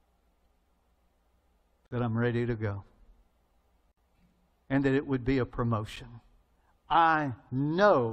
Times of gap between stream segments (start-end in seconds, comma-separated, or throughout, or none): 1.86-1.91, 3.92-3.97, 5.96